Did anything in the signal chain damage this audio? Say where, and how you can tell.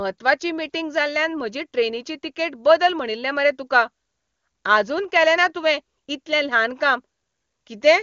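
No, nothing damaged this audio.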